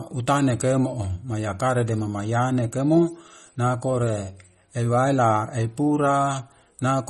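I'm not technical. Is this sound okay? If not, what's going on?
No. The speech sounds watery and swirly from start to finish, with metallic chirps on s sounds and no treble above 13.1 kHz. That is likely MP3 compression: to save space, the encoder cut off the highest frequencies and let faint details flicker on and off.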